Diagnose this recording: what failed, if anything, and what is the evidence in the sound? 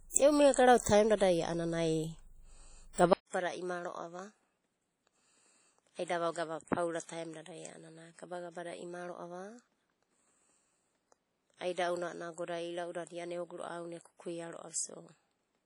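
Codec stage, throughout: the speech carries the swirly, smeared artefacts of a heavy lossy encode even though the file is a high-rate MP3. The likely cause is low-bitrate audio saved at a high bitrate, a source near 32 kbit/s re-encoded. Unlike a plain low-bitrate MP3, the generous container bitrate cannot remove damage already baked in.

Driver or device stage, from 3.13 s to the end: after a 200 ms silence, the level drops about 10 dB, nothing remains above 11.4 kHz, and a new noise floor sits roughly 45 dB below the speech. This is likely an input switched to a poorer device. A codec cut-off would instead run unchanged through the whole clip, with no gap or level step.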